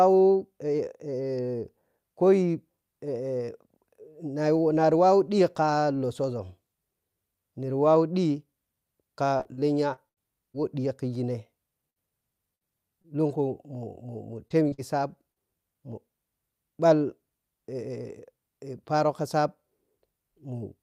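Repeated packet loss (robotic sound) hits at 9.37–10.56 s, between "niri wawa ɗhika" and "wo ɗhiya khigine", then at 11.90–13.06 s and 14.48–15.38 s. Four to six short gaps, up to 78 ms, are each patched by prolonging the preceding sound, leaving the speech choppy, with pieces missing.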